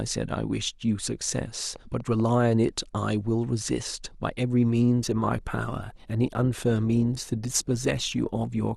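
Something in the chain, likely interference from nearby equipment or a faulty connection, injects a train of clicks from 1.76 s to 2.30 s. About five similar pulses arrive at an uneven pace, averaging roughly 7.5 per second. Their peaks reach about the level of the speech itself, so they stand out as distinct ticks and pops laid on top of the talking rather than buried beneath it.

At 4.98 s the adaptive stream drops to a lower bitrate and stays there to the end. The connection slowed, so the player switched to a leaner encoding. The change fits a step down from around 64 kbit/s to around 24 kbit/s Opus. There is no gap, just a sudden loss of quality: codec artefacts become more present.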